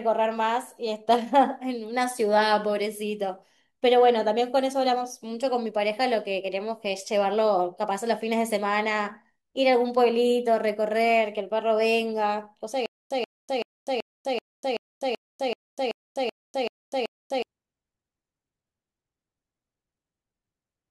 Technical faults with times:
12.86-17.42 stutter with silent gaps

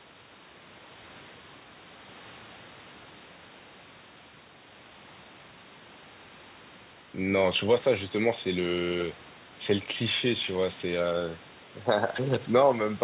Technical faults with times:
none

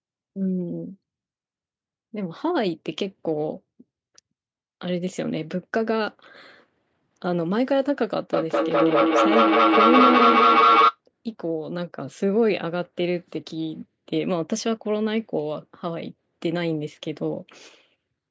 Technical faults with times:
8.33-11.00 feedback echo between two devices

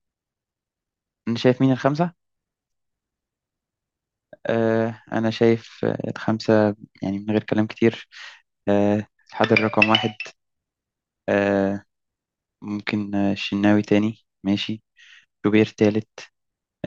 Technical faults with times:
none

